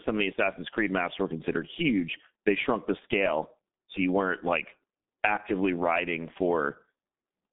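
From start to finish the speech sounds muffled, hoarse and thin, with blurred consonants and nothing above about 3.6 kHz or below 200 Hz. This is heavy G.723.1 codec damage: coarse 30 ms frames and a slowly updated voice model, fitting a rate near 6 kbit/s.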